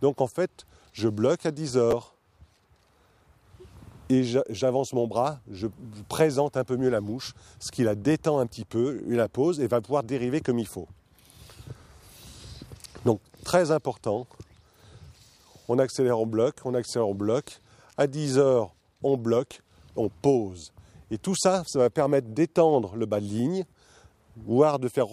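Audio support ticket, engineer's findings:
Chunks out of order at 1.91 s: brief jumbled moment, three hard joins. One 5.8 ms block played two blocks late. Probable buffer/queue handling in playback or capture path; block size fits a 256-sample buffer at 44.1 kHz.

Chunks out of order at 8.69 s: shorter garbled moment. Same 5.8 ms block size, delivered one block late. Same mechanism, likely the same buffering stage reordering writes.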